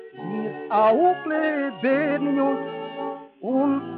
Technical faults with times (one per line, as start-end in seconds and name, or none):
0.94-2.11 drift correction step